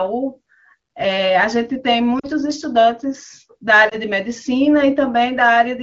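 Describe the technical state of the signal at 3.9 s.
A lost AMR speech frame sits at 3.89 to 3.96 s. The decoder bridged it by repeating the previous pitch and vocal-tract parameters at reduced gain, giving a brief dip or warble in the speech that fits a single 20 ms gap in the wideband stream.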